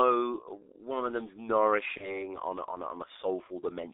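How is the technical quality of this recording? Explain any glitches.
Technical quality is poor, with heavy low-bitrate codec damage throughout and one concealed dropout.

Throughout, the speech sounds muffled, hoarse and smeared at the consonants, confined to roughly 300 Hz to 3.7 kHz. This is G.723.1 codec damage: its 30 ms frames and slow-updating voice model, at a rate that fits 6.3 kbit/s, discard detail and high frequencies.

From 1.97 to 2.30 s the speech turns into a stretched, fading sound and stays weak or distorted before recovering. This is VoIP packet loss concealed by the speech codec. A gap that fits a single lost 30 ms frame was filled by extrapolating the previous pitch and filter. Because each frame builds on the last, the damage lingers well beyond the gap.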